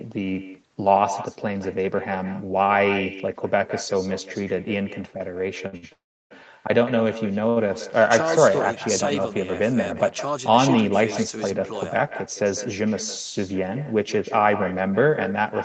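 Throughout the speech, every phrase is trailed a fraction of a second later, roughly 150 ms, by a quieter, thinner copy sitting about 12 dB below the original. This is echo with no canceller: the far end is playing the call on a loudspeaker, its microphone picks that playback up, and nothing strips it out, so the talker's own sound returns after the network round trip.

From 5.67 to 5.75 s and again from 5.77 to 5.84 s, a sound is held unnaturally long, by 52 ms and then 58 ms, with a slight buzz or dip. A third hold follows at 7.49 to 7.58 s, lasting 68 ms. Each is a short stall from a late packet: the jitter buffer ran dry, so the receiver stretched the last sound until the packet arrived, then carried on from the same point without losing anything.

Between 5.92 and 6.32 s the sound stops for longer. The last sound continues briefly as a fading buzz or hiss, then goes silent for about 320 ms before resuming exactly where it left off, so 381 ms of gap has been inserted and nothing is lost. 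This is a call audio freeze, likely caused by packets held up in transit that emptied the jitter buffer until they arrived.

From 12.45 to 13.39 s the speech runs slightly hurried, at about 105% speed, while the pitch stays where it was. This is a jitter buffer speed-up. The buffer was holding more audio than its target, so the receiver trimmed many tiny pitch-period-sized slices in a row, roughly 50 ms in total, to bring the delay back down. Throughout the clip, nothing is heard above 8 kHz, which is the bandwidth of the call path.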